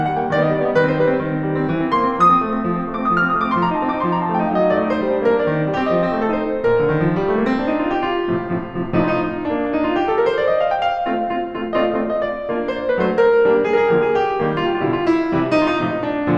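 No technical faults occur at any point in the music, so there is nothing to describe in time order.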